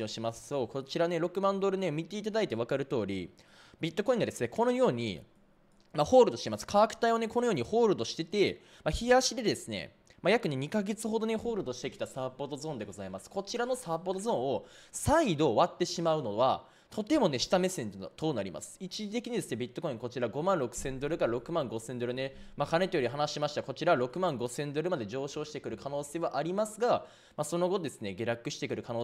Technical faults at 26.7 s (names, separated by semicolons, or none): none